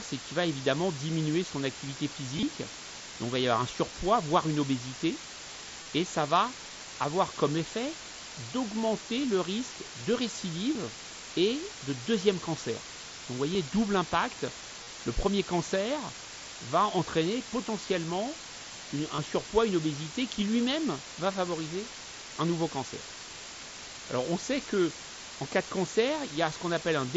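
Low bit depth with dither runs through the whole speech clip. The sound points to roughly 5 bits, with dither turning the rounding error into a steady, even white hiss about 10 dB below the speech. Because of the dither, it does not distort.

Concealed Bluetooth headset packet loss occurs at 1.33 s, at 2.37–2.43 s after "son activité", at 5.82–5.86 s after "surpoids voire une obésité", at 10.74 s, at 13.53 s, at 14.83–14.87 s after "double impact", and at 19.16–19.18 s. Lost headset packets were filled by repeating recent waveform. The single lost packet at 1.33 s is nearly hidden, while the 30–37.5 ms losses give a short buzzy hold and a slight warble as real audio resumes through the mSBC link.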